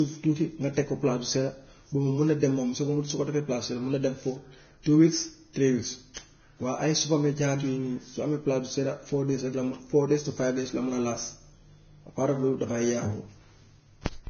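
Throughout, the speech sounds hissy and grainy, likely Vorbis compression near 18 kbps; coarse treble quantisation speckles the spectrogram, which stops at 6.6 kHz.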